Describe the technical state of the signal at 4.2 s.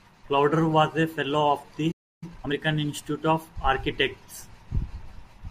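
At 4.2 s the speech signal is intact, with no audible technical fault.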